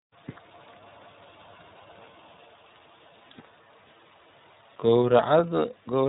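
From start to finish the speech carries the sound of the iLBC codec, a narrowband VoIP coder working here in 30 ms frames, which fits its 13.33 kbps mode. Each frame's excitation is rebuilt independently, leaving the voice clear but plainly rough and slightly synthetic. Nothing above 3.8 kHz survives, so the audio sounds thin and telephone-like. On a spectrogram the energy stops at a hard ceiling near 3.8 kHz, with harmonics looking grainy rather than smooth.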